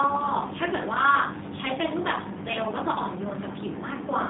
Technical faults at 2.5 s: G.729 codec

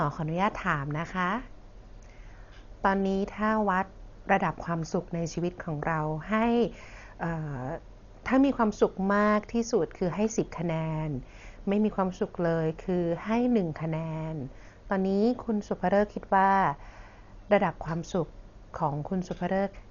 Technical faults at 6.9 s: Dolby Digital compression

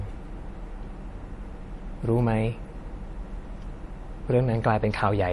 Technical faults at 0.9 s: MP3 compression

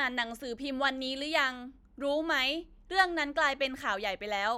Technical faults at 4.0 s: none

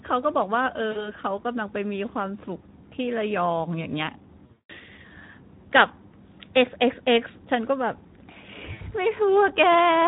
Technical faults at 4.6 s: Speex codec; VoIP packet loss concealed by the speech codec

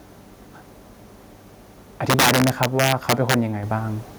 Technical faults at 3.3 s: integer overflow

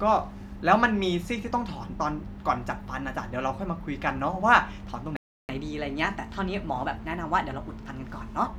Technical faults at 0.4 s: none

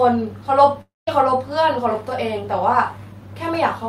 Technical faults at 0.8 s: long network dropout

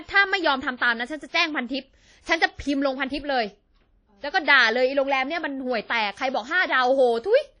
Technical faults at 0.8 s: WMA compression; pre-echo

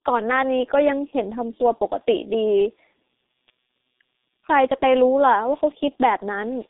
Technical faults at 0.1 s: G.723.1 codec

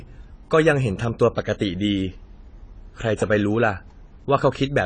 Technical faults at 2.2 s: AAC compression

